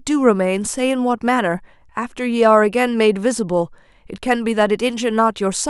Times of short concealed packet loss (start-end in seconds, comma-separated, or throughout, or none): none